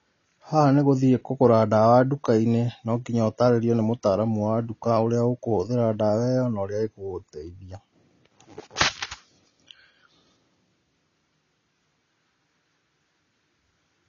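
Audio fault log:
Throughout: AAC compression, likely. The speech is dull, with nothing above 6.9 kHz, and the codec damage is plainly audible as a smeared, warbling texture on sustained sounds and a fizzy edge on sibilants. The encoder has too few bits for each frame, so it drops the top band and coarsely quantises what remains, which fits AAC-LC at roughly 24 kbps. A simple low-pass filter would dull the sound without this swirling, unstable grain.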